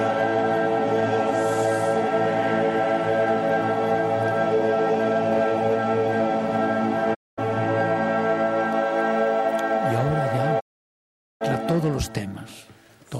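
A digital broadcast dropout mutes the sound from 7.13 to 7.40 s, then from 10.59 to 11.43 s. Each cut fades out within 20 ms. Whatever was sent during those gaps is gone.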